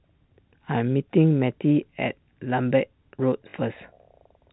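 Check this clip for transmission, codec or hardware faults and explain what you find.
One transmission fault is audible, heard through telephone-band G.711 coding. Packet loss with last packet repeated, 3.50 to 3.54 s: 40 ms went missing, consistent with two 20 ms packets. The receiver replayed the previous packet, giving a 50 Hz robotic stutter.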